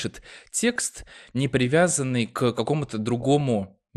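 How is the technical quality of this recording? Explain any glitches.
Pretty rough, honestly. The speech sounds dull and gurgly the whole way through, and there are two stretches of burbling damage.

Throughout there's what sounds like MP2 compression, likely at a low rate around 80 kbps. Upper sub-bands drop out and the remaining ones get coarsely quantised, giving that murky, granular texture.

From 0.69 to 1.09 s and again from 3.20 to 3.69 s you get DAB burbling. Bit errors from weak reception slip past error correction and corrupt the audio data, producing short blips of noise in single sub-bands. The first burst is a bit heavier.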